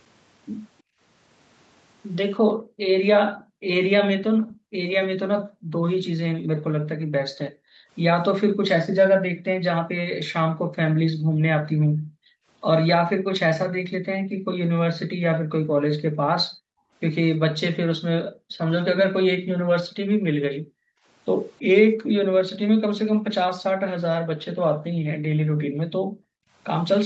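Speech carried over a call, with content ending at 8 kHz on a spectrogram. The background is gated by the echo canceller at 0.82–1.0 s (about 29 dB down), intermittently from 2.54 to 22.15 s for roughly 7 s in total, and from 24.76 s to the end (about 40 dB). Those spans show as sudden dark gaps in the noise floor on a spectrogram and a flattened waveform floor. From 3.36 to 4.57 s a faint copy of the speech trails by 321 ms at about 30 dB below it, likely an echo leak, visible as weak repeated harmonic traces offset in time.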